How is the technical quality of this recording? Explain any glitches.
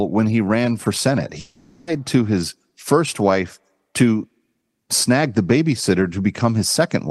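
The speech has one glitch. From 1.39 to 1.90 s, the sound smears into a fading buzz or hiss, then resumes with roughly half a second missing, likely a long network dropout concealed by the receiver.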